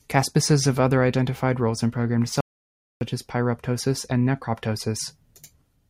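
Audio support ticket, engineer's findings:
Audio dropout to silence, 2.41–3.01 s: speech cuts after "identified roles in programmed", returns at "as pyroptosis and". About 0.6 s of silence, no room tone. Likely input loss (link drop or mute) while the recorder kept writing.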